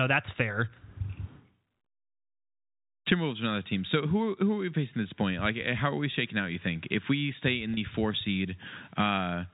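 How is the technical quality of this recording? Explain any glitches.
There is one brief glitch, heard over telephone-band audio capped at 4 kHz that fits G.711 coding. At 7.74 to 7.77 s, just after "if we stay in", a short buzzy hold is packet loss with pitch repetition: about 30 ms of audio, consistent with a single lost packet, is bridged by repeating the last pitch period.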